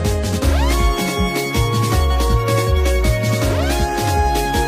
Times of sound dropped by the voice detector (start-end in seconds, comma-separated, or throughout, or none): none